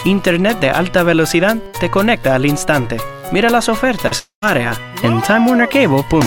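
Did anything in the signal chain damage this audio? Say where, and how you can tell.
Yes, the damage is on the network side. At 4.07 to 4.13 s there is a short concealed packet loss: about 40 ms of audio never arrived, and the decoder bridged the gap by extending the preceding sound for roughly 36 ms before blending back. It comes across as a brief smear or wobble rather than a gap. The sound never goes quiet, which is what separates it from a dropout.

From 4.19 to 4.44 s the audio thins into a fading buzz or hiss and then goes silent for about 110 ms. It resumes with roughly 240 ms missing, about 230 ms of which was papered over with synthesized continuation. That decaying fill followed by true silence and a skip forward most likely points to a long network dropout. A brief concealed loss never empties out into silence the way this one does.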